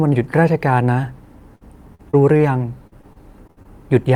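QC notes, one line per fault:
1.55–2.41 s, repeated packet loss (robotic sound): four short holes in the speech, the longest about 54 ms, each covered by stretching the preceding sound. The repeated patches, about 16% of this span, make it choppy.
2.87–3.67 s, repeated packet loss (robotic sound): a denser run of six holes, the longest about 59 ms, concealed by extending the last audio. About 22% of the stretch is filled this way, so the choppy, clipped quality is stronger here.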